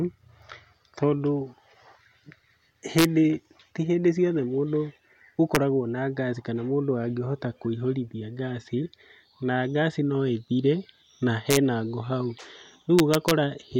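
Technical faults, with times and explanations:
2.99–13.31 s, integer overflow: at 2.99–3.05 s, 5.55 s (just before "na ngaci kana mũndũ"), 11.51–11.57 s (between "ngaci no ĩthire na" and "ngũ hau") and 12.99–13.31 s, loud speech peaks run about 1 dB past the integer limit. Instead of being held at the ceiling, they wrap round to the opposite extreme. Each overshoot becomes a full-scale jump, heard as harsh cracks far sharper than clipping.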